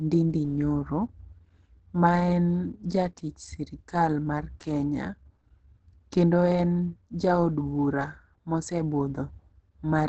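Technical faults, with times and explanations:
Throughout, Opus compression: the speech sounds muffled and hoarse, with nothing above about 8.9 kHz and plainly audible codec damage. The likely cause is Opus in its speech (SILK) mode at wideband, which fits a low bitrate of around 16 kbps, where the encoder models the sound coarsely and drops the top band. Unlike MP3 damage, there is less swirling or watery flutter from spectral holes, and more a steady hoarse dullness.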